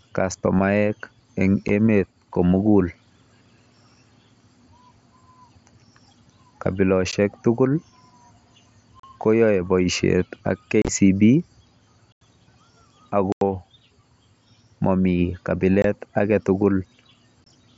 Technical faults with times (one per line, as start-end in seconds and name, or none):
1.68 unconcealed Bluetooth headset packet loss
7.11 unconcealed Bluetooth headset packet loss
9.00-9.04 unconcealed Bluetooth headset packet loss
10.82-10.88 unconcealed Bluetooth headset packet loss
12.12-12.22 unconcealed Bluetooth headset packet loss
13.32-13.42 unconcealed Bluetooth headset packet loss
15.82-15.85 unconcealed Bluetooth headset packet loss
17.44-17.47 unconcealed Bluetooth headset packet loss